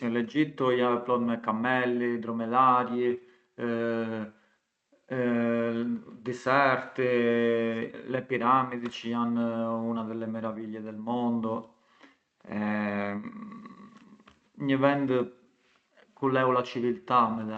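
Listening through this speech clip, nothing stood out, and the call-path coding with its high end limited to about 8 kHz sounds as expected for that path.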